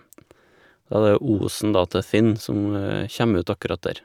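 No technical faults can be heard anywhere in this recording.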